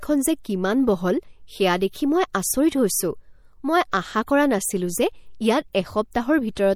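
From the start, the speech carries plainly audible MP3 compression. It is the likely cause of a smeared, processed quality that runs through all of it. The encoder divides the sound into many narrow frequency bands. It spends its limited bits on the bands its hearing model rates as important and drops weaker detail. The damage fits a low bitrate of around 64 kbps. Nothing is left above 20.7 kHz.

At 6.11 s there is a pre-echo. A short hiss comes just ahead of a sharp attack and spreads over about 15 ms. The codec sized its noise for the loud onset. That noise then spread across the whole block, into the quiet moment before it. The attack sounds softened, with a brief haze in front.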